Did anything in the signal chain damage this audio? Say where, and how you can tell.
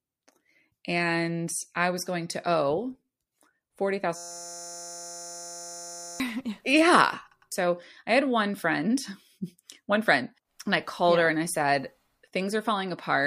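Yes. From 4.16 s to 6.20 s there's a system hang loop at the driver or buffer stage. The speech drops out and turns into a steady buzz at 172 Hz. That's one 5.8 ms slice of audio repeating exactly, hundreds of times, which fits a 256-sample ring buffer. The host or driver froze, but the hardware kept replaying that buffer, so about two seconds of real speech never got written.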